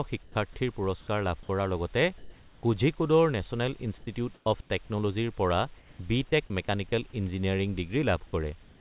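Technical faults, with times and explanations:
0.23–0.35 s, sound dropped by the voice detector: the sender's voice detector likely mistook quiet speech for background and stopped sending, so about 50 ms of sound vanishes under 120 ms of steady comfort noise just before "পুৰস্কাৰ লাভ".
2.18–2.63 s (ending at "কোঝিকোডৰ নেচনেল"), 3.98–4.07 s (right after it), 4.34–4.46, 4.61–4.70, 5.78–5.99 and 8.63–8.81 s, comfort noise in place of the background: transmission likely paused between phrases, and the receiver filled each gap with synthetic noise. The real background, about 22 to 27 dB below the loudest speech, turns flat and featureless, from about 6 dB quieter to about 5 dB louder.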